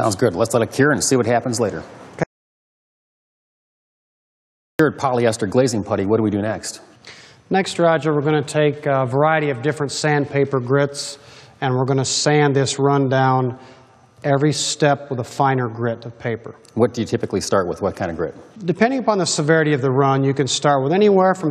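At 2.24 s the sound cuts to total silence until 4.79 s. This audio dropout to silence loses about 2.56 s, likely from a lost input.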